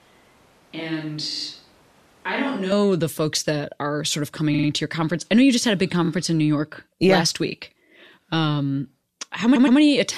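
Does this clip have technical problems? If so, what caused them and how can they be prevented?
Yes. From the start to 2.72 s the sound is roomy, hollow and thin, about 10 dB quieter, with room noise about 30 dB below the speech. This is likely a switch to a distant microphone. On a spectrogram, low frequencies are weaker and the noise floor is higher until an abrupt step at 2.72 s. Keeping the close microphone recording, and monitoring it, prevents this.

Repeated frames cause stutters at 1.30, 4.53, 6.04 and 9.55 s. In each, a short block of 46 ms, 46 ms, 23 ms and 116 ms respectively is replayed two or three extra times. On the waveform these show as identical repeated segments. Writing and transmitting each compressed frame exactly once, with sequence checking, prevents this.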